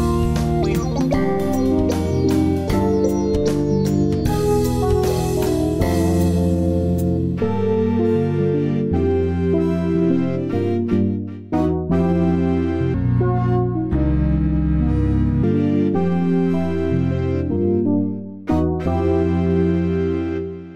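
A section at the wrong speed runs from 12.94 to 15.43 s, where the audio plays at 0.689 times its proper rate, likely from being fitted to the wrong clock. Pitch and pace drop together, about seven semitones lower, so everything turns deep and sluggish.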